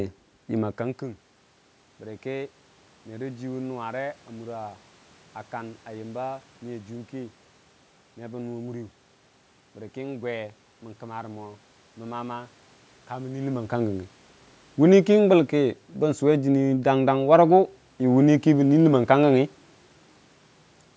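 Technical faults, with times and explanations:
No technical faults are present: the speech shows the ordinary band limit of call microphone processing, with nothing above 8 kHz, the background room noise belongs to the recording space, and the level shifts around half a second in and again near 13.5 s come from the talker moving relative to the microphone.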